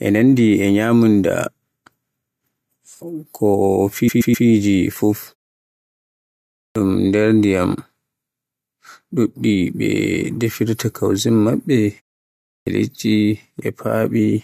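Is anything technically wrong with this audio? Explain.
Yes, there are two kinds of fault: repeated frames and clipped starts after pauses.

Repeated frames, 4.07 to 4.46 s: a 128 ms block of speech plays three extra times in a row. A run of compressed frames was written or sent more than once, so the decoder plays the same audio again. It sounds like a stutter. The clip is 384 ms longer than it should be.

Clipped start after a pause, at 6.68 s and 12.59 s: the first sound after each pause is missing. At 6.68 s about 75 ms is lost after a 1.41 s pause, and at 12.59 s about 76 ms is lost after a 0.66 s pause. The output falls silent in pauses as intended, but the device sleeps and then takes too long to wake and lock again. Speech therefore starts abruptly out of silence, without its first sounds.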